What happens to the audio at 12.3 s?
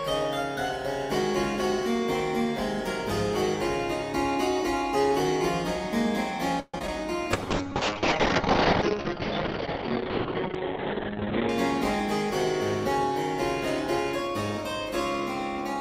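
Nothing goes wrong at 12.3 s; the audio carries on intact through that moment, with no dropout, click or distortion.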